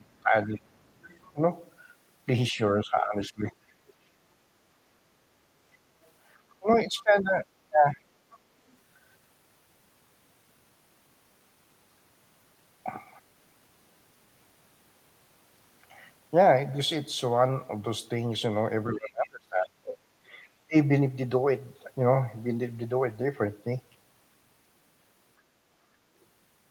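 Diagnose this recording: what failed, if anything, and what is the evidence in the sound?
Call processing: speech suppressed in double talk at 0.0–0.61, 1.33–1.42, 2.51–3.67, 6.59–8.03, 18.94–20.11 and 20.67–20.75 s. The level dips by roughly 20 to 30 dB, likely the echo canceller ducking during overlap, unlike the hard, abrupt gaps of network loss.

Call processing: the other side's voice is leaking through at 1.05–1.32 and 8.31–8.38 s, about 30 to 35 dB below the talker. It is likely residual loudspeaker echo the canceller missed, and differs from room reverb because it is a separate voice.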